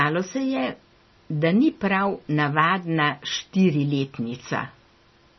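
Speech carrying heavy MP3 compression damage from start to finish, most likely from encoding at a very low bitrate, with the sound pointing to something around 24 kbps. Nothing survives above 5.9 kHz, so the top end is sliced off at a fixed point. What separates this from a simple low-pass filter is the watery, swirling texture beneath the speech, as weak frequency lines drop in and out frame by frame, which also blurs the attacks.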